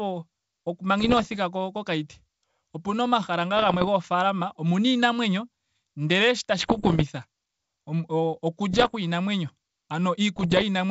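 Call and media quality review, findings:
Bit errors on an ADPCM link, speech: pops and rough, level-jumping bursts at 1.00–1.36 s, 3.57–3.89 s, 6.58–7.03 s (after "omuna iinamwenyo ndele shi"), 8.73–8.95 s and 10.36–10.64 s, from flipped bits on the G.722 link at roughly half to one-and-a-half percent. Each flipped bit throws off the decoder's step size and predictor, so the roughness rings on briefly. No dropouts or muted gaps, which sets this apart from packet loss.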